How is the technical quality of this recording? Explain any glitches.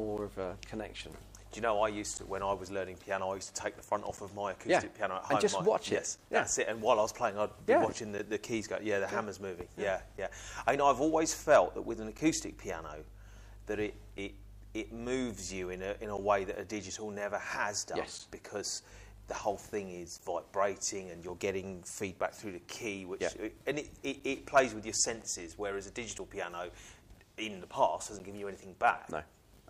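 The recording has one recurring fault: periodic USB or driver dropouts. From 0.18 s to 28.2 s, a short gap of silence of around 10 ms recurs every 2.0 s, about fifteen times in all. A background process is stalling the USB bus or audio driver on a fixed schedule, so each stall drops a brief slice of audio. The result is a steady, evenly spaced tick or pop, audible only while sound is present.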